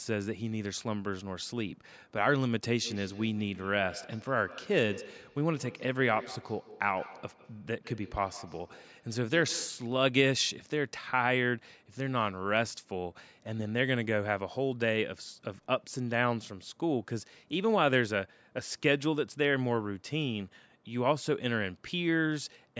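From 2.78 to 9.93 s, two devices on the call feed each other, producing feedback echo between two devices: the speech returns roughly every 150 ms, thinner and ringing, peaking about 17 dB below it.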